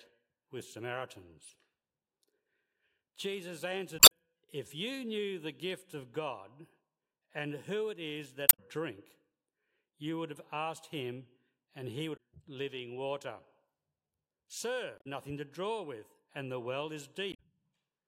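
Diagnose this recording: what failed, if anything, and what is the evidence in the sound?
Damaged data in the compressed stream, at the codec stage, causes brief glitches at 3.96–4.12, 8.46–8.60, 12.13–12.19, 14.95–15.06 and 17.30–17.40 s, where the decoder lost frame sync and resynchronised.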